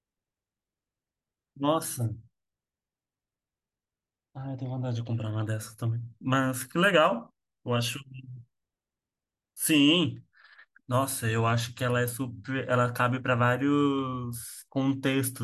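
No technical faults can be heard anywhere in the speech.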